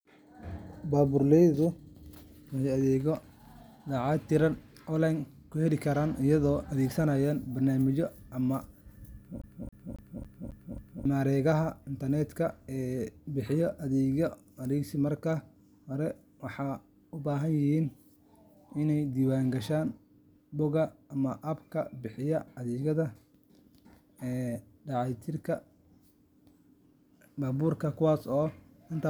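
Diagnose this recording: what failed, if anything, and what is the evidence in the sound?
The fault is at the playback stage: the CD is stuck on one turn. From 9.42 s to 11.05 s, the same 0.27 s of speech repeats six times, with a short mute at each jump. A scratch is throwing the laser back one track on every revolution, giving that fast, even stutter.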